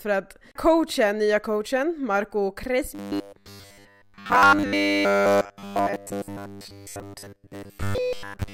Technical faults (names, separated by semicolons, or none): robotic sound from repeated short buffers